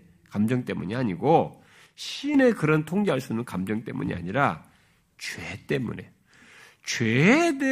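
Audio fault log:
1.86–2.34 s, one channel drops out: the speech abruptly falls by about 6 dB for roughly half a second, then snaps back to full level with no fade either way. The likely cause is one side of the stereo feed going dead, so after the mono sum only half the shared signal remains. It differs from a full dropout because the sound never vanishes to silence, and from a gain dip because the drop is a sudden fixed step with square edges.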